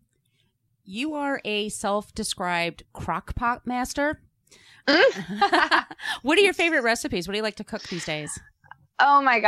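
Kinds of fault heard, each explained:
No kinds of fault are heard in this speech clip.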